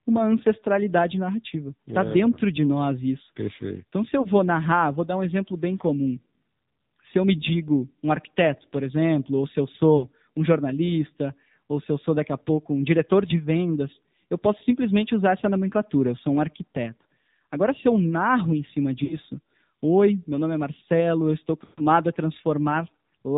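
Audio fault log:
Throughout, AMR narrowband mobile codec: the speech is boxed into a phone band with nothing above 4 kHz, so it sounds dull and flat at the top. At this level of damage it's plainly buzzy and synthetic, because a crude vocal-tract model driven by a handful of pulses is standing in for the real waveform. The coarseness fits a low mode of around 7.4 kbps.
4.22–4.28 s, 9.98–10.06 s, 19.04–19.17 s and 21.64–21.82 s, lost AMR speech frames: the decoder missed frames and filled the gaps by repeating the last good pitch and spectral settings at falling gain. The first gap is about 20 ms and gives a quick dip. The 40 ms and 60 ms gaps draw the sound out briefly. The 140 ms gap at 21.64 s stretches the sound and fades it to silence, and the speech comes back rough for a moment.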